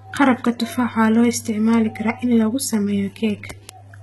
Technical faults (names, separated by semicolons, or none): HE-AAC compression; word clock ticks